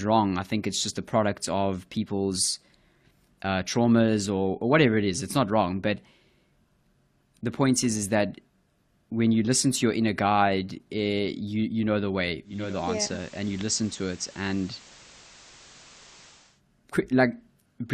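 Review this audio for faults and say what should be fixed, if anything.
Right after "know the way", at 12.43 s, a steady hiss rises to roughly 25 dB below the speech and the level dips by about 1 dB. It stays that way until 16.62 s. This is digital radio blending to analogue: the receiver lost its digital stream and cross-faded over 372 ms to the station's FM signal, whose noise floor explains the change, then blended back. To prevent it, improve digital reception or disable automatic blending during recording.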